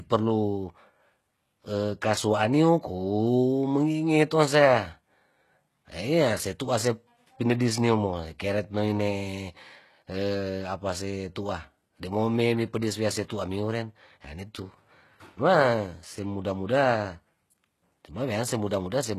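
Throughout the speech, the treble sounds synthetic, with gritty, lispy sibilants and no content above about 12.3 kHz. This points to HE-AAC compression at a low rate near 16 kbps. The upper band is likely rebuilt from copied lower bands, so its harmonics fail to align with the coded range below.

At 7.59 s and again at 13.28 s, a brief pre-echo precedes a sharp onset, spreading over 11 ms and 19 ms respectively. The codec spreads its block's quantisation noise backward into the silence before the attack, leaving a short hiss and a softened, smeared transient.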